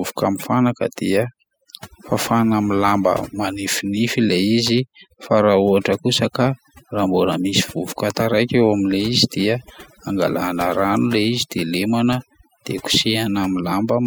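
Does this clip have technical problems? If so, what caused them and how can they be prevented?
Yes. Throughout the speech, the background drops and breaks up into twinkling specks. This is overdone noise removal: a noise reduction stage set too aggressively cuts individual frequency bands whenever their level sits close to its noise estimate, so the quieter parts of the voice are removed along with the noise. To prevent it, use gentler reduction settings and check the result by ear before committing.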